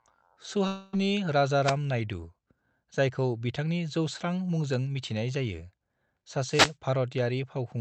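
From 0.67 to 0.95 s the speech stops arriving, most likely because of a long network dropout: about 260 ms of audio never reached the receiver, and it filled nearly all of that gap by stretching the last sound it had. The result is a smeared, buzzy continuation that fades rather than dropping to silence. The speech then resumes further on, with that stretch simply missing.

Two wireless microphone noise hits follow, at 1.62 to 1.76 s and at 6.47 to 6.75 s. In each, the FM radio link faded as reflected signals cancelled, so the receiver's own noise rose. This is heard as a brief swish of static, about 0.13 s long the first time and nearly 0.3 s the second, within the 8 kHz band the call codec passes.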